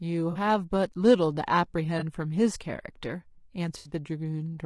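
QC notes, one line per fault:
Throughout: low-delay AAC compression. The speech is rough and grainy, with noise filling the gaps between harmonics and a thin, synthetic-sounding top band. The likely cause is AAC-ELD's short frames at a rate that fits around 32 kbps. On a spectrogram, the harmonic lines look blurred and the band between them is speckled.
0.31–0.37 s, 1.99–2.03 s, 3.77–3.91 s: AAC frame loss with concealment. The decoder rebuilds missing stretches of roughly 40, 20 and 80 ms from the last good spectrum, producing smeared, noisy or phasey patches. A spectrogram shows smeared, harmonically vague blocks at these times, and the waveform shows altered texture.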